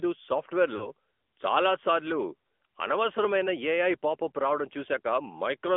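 A short speech clip that's been through the AMR narrowband mobile codec the whole way. It sits in a telephone band of roughly 250 Hz to 3.5 kHz, and the coding damage is plainly audible: a buzzy, slightly synthetic edge from the vocal-tract model, which fits a mid-rate mode around 10.2 kbps. There are also lost AMR speech frames from about 0.76 to 0.90 s. Around 40 ms of data went missing, which fits two dropped 20 ms frames. The decoder covers the gap by repeating the last good settings at falling level, so you hear a brief smeared dip before the sound recovers.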